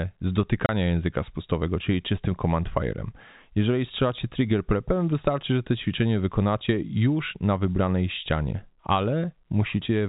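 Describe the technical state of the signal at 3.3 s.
At 3.3 s the speech is intact, carried over a G.711 telephone coding path whose 4 kHz band limit shapes the sound without introducing any fault.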